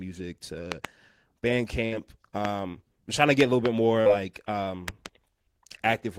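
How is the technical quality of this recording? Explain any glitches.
The speech carries four faults: two pairs of loud pops and two dropouts from packet loss.

From 0.72 to 0.87 s and again from 4.88 to 5.08 s there is a loud pop, each time two in quick succession. They peak about 20 dB above the speech. A sudden voltage pulse, likely from a switch, plug or static, lands on the signal. The speech continues underneath.

At 1.85 to 1.94 s a burst of packet loss removes about 60 ms of audio. The receiver stretches the last sound over roughly 62 ms and fades it down. You hear a held buzz or fading hiss, then speech resumes with that stretch gone.

At 4.01 to 4.08 s a short concealed packet loss drops about 40 ms. The decoder fills about 43 ms by extending the preceding sound, then blends back in. It comes across as a brief smear or wobble.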